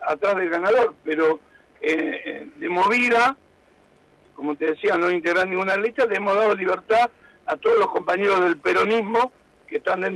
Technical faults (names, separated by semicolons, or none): none